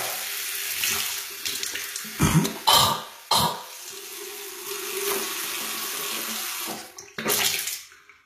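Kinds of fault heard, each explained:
HE-AAC compression: The audio runs through a low-rate codec whose damage is plainly audible throughout, and the sound points to a bitrate near 20 kbps, likely HE-AAC. Only the lower spectrum is coded directly; the treble is rebuilt by copying lower bands upward under a coarse envelope, so the top end sounds synthetic, with harmonics that fail to line up across the crossover and a gritty, metallic edge. Nothing is present above 14.9 kHz.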